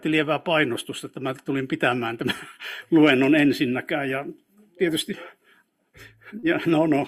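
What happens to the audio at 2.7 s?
Nothing goes wrong at 2.7 s; the audio plays through that point without any dropout, click or other disturbance.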